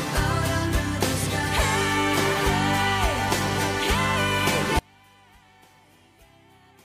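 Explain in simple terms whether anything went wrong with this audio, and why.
From about 4.79 seconds to the end at 6.85 seconds, the sound suddenly drops to almost nothing, leaving only a faint trace of what was there before. This is most likely a case of one channel inverted: one side of the stereo signal has been flipped upside down, so when the two sides are combined into one, the shared parts cancel each other out and nearly disappear.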